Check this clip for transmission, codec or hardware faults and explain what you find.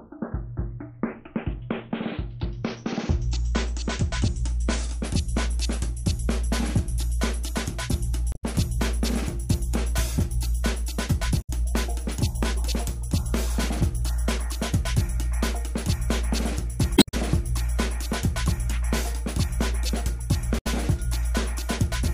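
There's one problem here, and it shows up four times: damaged data in a compressed stream. Short bursts land at 8.32 to 8.44 s, 11.38 to 11.50 s, 16.94 to 17.14 s and 20.57 to 20.67 s, each a tenth to a fifth of a second long. In those spots some of the encoded bytes were corrupted, so the decoder misreads the frames, loses its place and hunts for the next good frame header. You hear each one as a brief glitch cutting through the sound.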